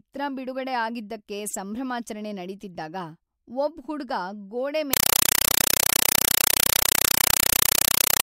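Right after "ಹುಡ್ಗ ಗೋಡೆ" at 4.93 s, the speech turns into loud chattering static: a compressed stream played as audio, undecoded AC-3 bursts at 31.25 Hz, each about 5.3 ms, to the end.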